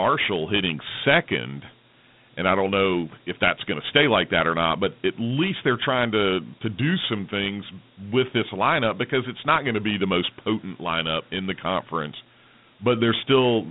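Dialogic VOX ADPCM coding, throughout the speech: 4-bit adaptive steps leave gritty hiss tracking the speech, and a narrow 150 Hz to 3.7 kHz line band leaves nothing above 3.8 kHz.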